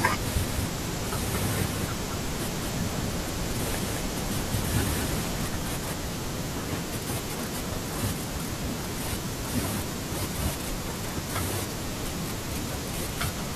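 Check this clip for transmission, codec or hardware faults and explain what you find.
One fault is present: a doubled audio track, running from the very start of the clip until 5.46 s. The speech was likely picked up a second time through a slower path, so a second full-band copy is mixed in around 200 ms behind the first and a few decibels quieter. It sounds like a dry, evenly spaced echo of every syllable, with no room tail, and it cuts off abruptly at 5.46 s.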